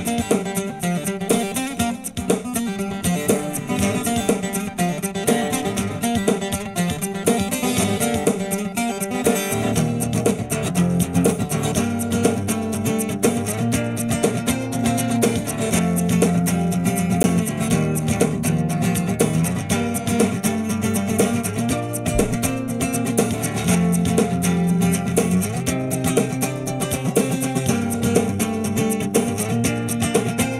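A block of digital silence at 17.23 s drops the audio out for 10 ms and back with no fade, heard as a tick or dip. The output buffer was not filled in time or a calculation produced invalid values.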